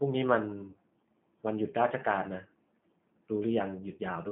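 From start to finish the speech carries G.729 codec damage, plainly audible. The sound is squeezed into a telephone band of roughly 150 Hz to 3.5 kHz, and the coarse, slightly synthetic roughness fits an 8 kbit/s G.729A stream. The codec rebuilds each 10 ms frame from a vocal tract filter, a pitch predictor and a handful of pulses. Unlike a plain band-limiting filter, it adds a grainy, buzzy texture inside the passband and not just dullness.

At 0.70 s, VoIP packet loss concealed by the speech codec takes over until about 0.77 s. About 40 ms of audio is missing, which fits two 20 ms packets. The decoder fills the gap by repeating its last pitch and filter at falling gain, so the sound smears and fades. Unlike a dropout, the gap is not silent. Unlike a click, the roughness carries on briefly after the packets return, because each frame builds on the last.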